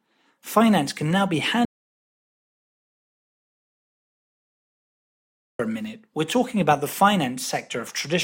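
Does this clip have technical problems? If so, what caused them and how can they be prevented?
Yes. There is an audio dropout to silence from 1.65 to 5.59 s, right after the words "can now be". The speech cuts out mid-flow and the gap is dead silence, with no room tone at all. About 3.9 s of speech is lost. The likely cause is that the input signal disappeared, through a disconnected device, a failed link or a stray mute, while the recorder kept writing silence. To prevent it, secure cables and connections and monitor input levels live during recording.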